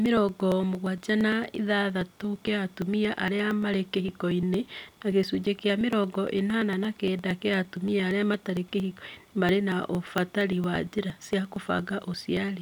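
From about 0.06 s right through to 12.48 s, the speech is peppered with periodic USB or driver dropouts, roughly every 0.115 s, so close to nine a second and about a hundred in all. Each time, something blocks the audio path for around 10 ms, and that chunk is simply skipped rather than padded with silence. You hear it as a steady ticking or clicking riding on the speech, only where there's signal to break.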